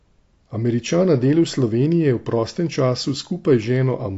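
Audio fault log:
throughout AAC compression: plainly audible, with dull, smeared speech and fizzy sibilants, likely from low-bitrate AAC-LC coding consistent with about 32 kbps, which narrows bandwidth and coarsens spectral detail.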